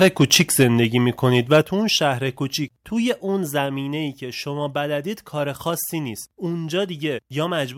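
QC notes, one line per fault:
0.01–0.64 s and 1.52–1.58 s, microphone overload: peaks push about 7 dB, then about 2 dB, past the converter's ceiling, flattening a few percent of samples in the first stretch and several percent in the second. The squared-off tops give a harsh crackle, likely from excessive input gain.
0.63, 1.62, 2.64, 3.66 and 7.74 s, microphone volume stepped down: level and background fall abruptly by about 3, 6, 3, 2 and 2 dB. The first two drops follow the clipped stretches, likely the call software cutting the device's input gain in single steps.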